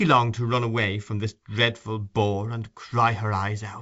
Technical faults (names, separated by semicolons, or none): none